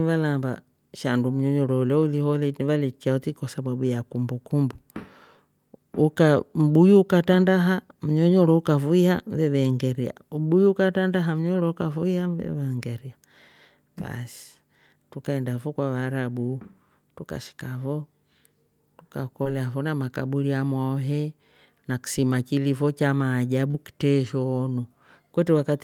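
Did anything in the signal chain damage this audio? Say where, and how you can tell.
Yes. Two brief smears, at 19.43 to 19.47 s just before "fona makaburi ah amwaho" and at 23.71 to 23.76 s right after "na ksima kilifo cha", are short concealed packet loss at the network stage. Packets arrived too late, and the decoder bridged each gap by extending the preceding sound before blending back.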